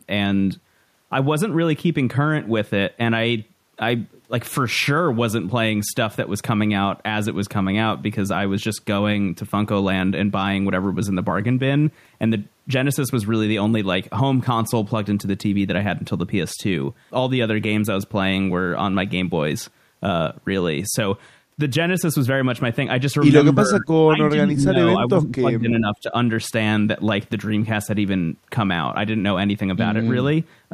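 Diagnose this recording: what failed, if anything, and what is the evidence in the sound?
Call processing failed, likely speech suppressed in double talk. While far-end sound played, the echo canceller mistook this talker for loudspeaker echo and turned both down. From 23.64 to 24.74 s and 25.08 to 26.13 s, the speech dips in pieces by up to about 15 dB, for roughly 0.7 s each.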